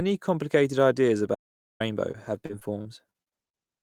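From 1.35 to 1.80 s the speech cuts off abruptly into dead, total silence with no room tone, then resumes mid-flow. This is an audio dropout to silence: about 0.45 s of input was lost and silence was written in its place, most likely from a briefly disconnected or muted input.

Between 2.11 and 3.57 s the speech turns choppy, a robotic stutter typical of repeated packet loss. Short holes, the longest 39 ms and fitting around nine lost bursts, keep recurring. Some were patched by stretching the preceding sound, about 18% of the span; others were left missing.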